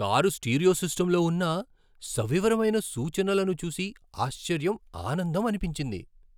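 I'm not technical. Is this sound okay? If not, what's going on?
Yes, this speech recording sounds fine, with no technical problems to point out. There's nothing going on here that needs explaining or fixing.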